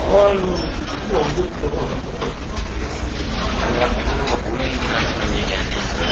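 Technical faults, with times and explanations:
Throughout, transcoding between lossy codecs: the sound was likely encoded several times in a row, probably AAC, then HE-AAC, then Opus at a low bitrate. Nothing is heard above about 7.4 kHz, and swirly, smeared artefacts from the different coding stages pile up together.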